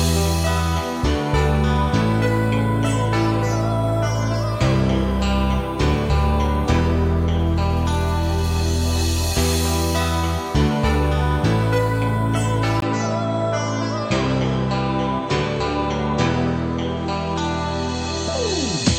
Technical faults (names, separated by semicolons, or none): input switched to a poorer device